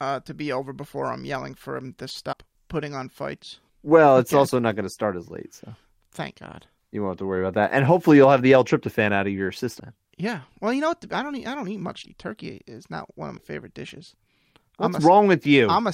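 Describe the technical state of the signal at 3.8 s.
At 3.8 s the signal is intact, with no fault audible at that point.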